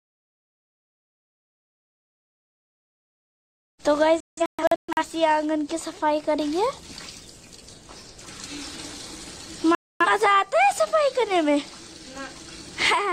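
At 4.20 s you get a digital broadcast dropout: the receiver lost clean frames and muted, so the audio breaks into several short holes scattered across 4.20 to 5.03 s, about half a second missing in total, the longest gap around 170 ms. Whatever was sent there is simply gone. It happens again from 9.75 to 10.06 s, a mute of about a quarter second before the sound picks back up.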